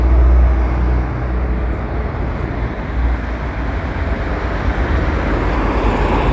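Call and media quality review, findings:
No technical faults found: the everyday sound recording holds steady level and continuity, with no audible dropouts, clipping, distortion or timing disturbances anywhere in the signal.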